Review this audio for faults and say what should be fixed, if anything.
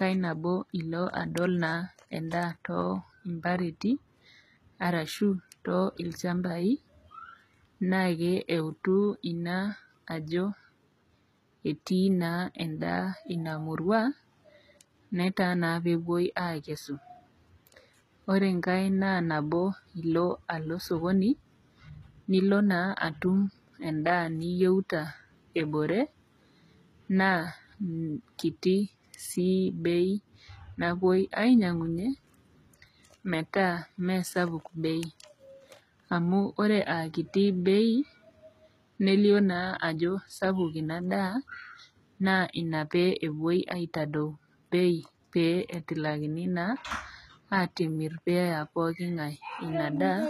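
Throughout the speech, s sounds turn gritty and metallic, with nothing above 14.9 kHz. This is likely HE-AAC compression, rebuilding the treble from copied lower bands at a bitrate near 20 kbps. Encode at a higher bitrate or with a full-band codec.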